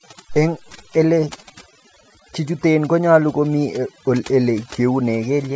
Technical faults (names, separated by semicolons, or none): overdone noise removal